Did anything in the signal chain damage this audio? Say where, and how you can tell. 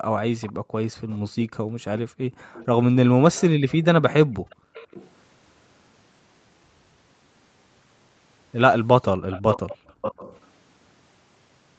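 Yes. Background gated by the echo canceller, in call processing: room tone drops by up to about 40 dB at 0.02–2.5, 4.26–4.74 and 9.16–9.96 s.

Echo leak, likely from incomplete cancellation of far-end loudspeaker pickup: a copy delayed 475–531 ms, about −25 to −10 dB, at 0.41–0.53, 1.1–1.18, 1.97–2.66, 4.5–5.1 and 9.31–10.46 s.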